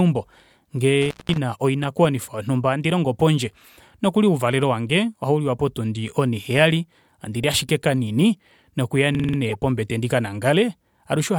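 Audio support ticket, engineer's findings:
Intermittent contact, 1.02 to 1.38 s: speech drops out for about 186 ms with crackle at both edges. Loose cable or plug opening briefly, leaving faint hiss.

System hang loop, 9.15 to 9.38 s: a 46 ms segment repeats five times, a 21.5 Hz stutter that fits a 2048-sample ring buffer. Driver froze while hardware kept cycling, with little or no audio lost.

Corrupt frame decoded, 9.49 to 9.55 s: short chirp, squeak or burst of noise at the wrong frequencies. A few damaged compressed frames were played anyway, with misread codes or gains.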